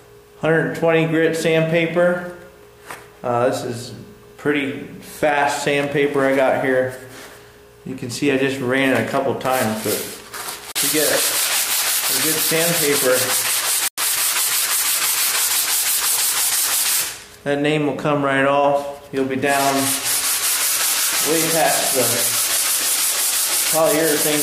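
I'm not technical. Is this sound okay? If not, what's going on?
No. Bluetooth stall at 10.72 and 13.88 seconds: the sound briefly drops to silence, 39 and 99 ms, likely because wireless interference delayed the audio reaching the headphones.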